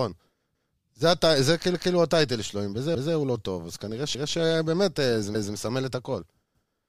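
A speech recording with overlapping chunks: at 0.55, 1.75, 2.95, 4.15 and 5.35 s, a 200 ms stretch plays twice, giving a regular stutter. Each 1 s chunk starts 200 ms before the previous one ends, so every join duplicates audio.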